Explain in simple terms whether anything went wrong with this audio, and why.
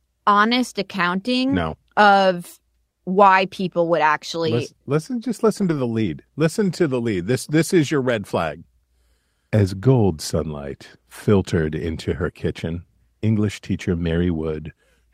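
Lost packet rebuilt from error correction, at 5.57–5.71 s (after "actually listen listen just") and 9.83–9.89 s (before "sunlight filtered into her"): missing pieces were filled from rough backup copies, so the sound turns briefly grainy and noisy rather than cutting out.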